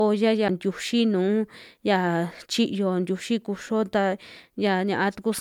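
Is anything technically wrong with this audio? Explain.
Yes, there are two faults.

Throughout the speech, the sound is swirly, smeared and hollow, and consonant onsets lose their edges. This is likely generation loss: repeated MP3 decoding and re-encoding, around four passes. The smearing goes beyond what a single encode at the rate this suggests, about 128 kbit/s, would produce. Each pass quantises again on a shifted frame grid, so the noise and spectral gaps build up. Content stops at about 20.1 kHz.

At 0.48 s, a tick and a very brief dropout of roughly 7 ms are followed by the speech resuming from a different point. This is a CD skip. The laser jumped to another turn of the disc spiral, so the player muted briefly and picked up playback elsewhere. That causes the abrupt discontinuity in the speech.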